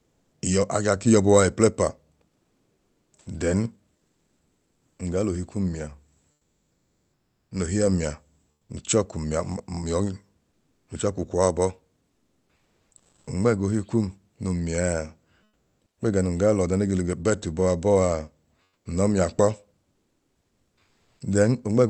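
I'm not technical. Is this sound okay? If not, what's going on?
No. The call software likely stopped sending sound whenever it decided nobody was talking, and the receiving end filled each gap with made-up hiss. This is comfort noise in place of the background, heard at 0.0 to 0.31 s, 2.29 to 4.99 s, 6.31 to 7.51 s, 8.53 to 8.65 s, 10.51 to 10.87 s, 18.67 to 18.85 s and 19.93 to 21.19 s. In those pauses, the room's real sound gives way to a flat, featureless hiss, often quieter.

At 7.49 to 7.51 s the same speech detector was likely a moment late to notice talking had resumed, so the first sliver of sound was never sent. This is an onset clipped by the voice detector. The speech snaps in abruptly, with its soft start missing, right where the fake hiss of the pause before it ends. This is a very brief cut, about 20 ms, but it makes the start sound sudden.

The call line itself, which drops the top end above about 8 kHz and adds its usual coding texture, is just how this kind of call sounds.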